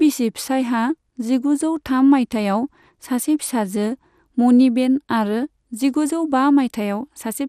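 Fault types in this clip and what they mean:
MP2 compression: the speech runs dull throughout, with nothing above 15 kHz, and carries a plainly audible gurgling, granular roughness, likely from MPEG Layer II coding at a low rate, which fits about 80 kbps. Starved of bits, the coder shuts off upper sub-bands and quantises the remaining ones coarsely, so the top flickers in and out. A plain low-pass filter would dull the sound without the grainy texture, and MP3 damage leans more to swirly, watery artefacts.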